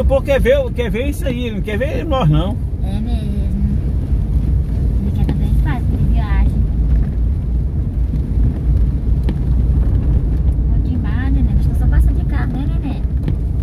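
Nothing technically wrong can be heard anywhere in the audio, with no dropouts, clicks, distortion, level jumps or timing errors at any point.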